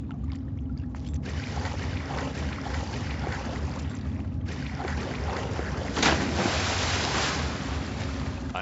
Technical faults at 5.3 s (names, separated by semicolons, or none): none